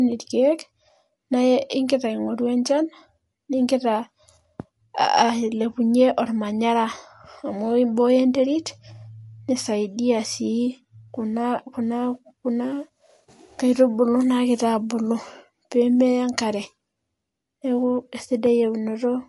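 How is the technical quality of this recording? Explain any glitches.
The speech carries plainly audible codec damage for its whole length. Nothing is present above 11.3 kHz, so the top end sounds dull and closed-in, and s sounds come out swirly and metallic, with a watery shimmer on the quieter detail. The likely cause is MP3 compression at a low bitrate, consistent with roughly 50 kbps: short of bits, the encoder cuts the treble at a fixed point and drops weak frequency lines, which flicker in and out between frames.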